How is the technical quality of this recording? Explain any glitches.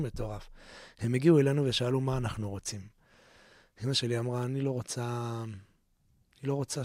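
No glitches or technical faults can be heard here.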